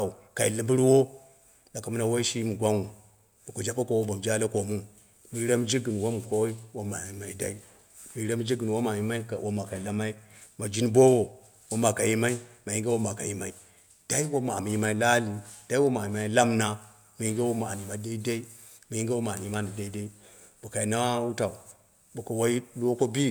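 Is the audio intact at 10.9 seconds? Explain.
Yes, at 10.9 seconds the speech runs through cleanly, with no dropout, click, distortion or other fault to be heard.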